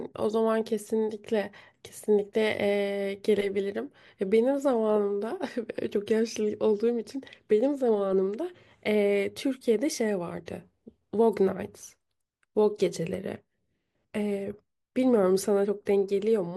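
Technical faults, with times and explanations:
No technical faults are audible in this speech recording; the signal stays steady and intact across its whole duration.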